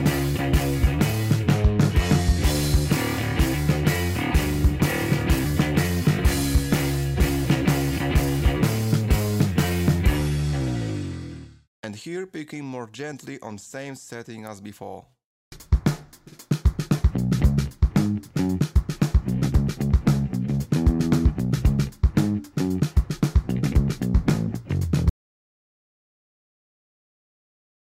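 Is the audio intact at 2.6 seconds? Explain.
Yes, at 2.6 seconds the audio is intact, with no fault present at that moment.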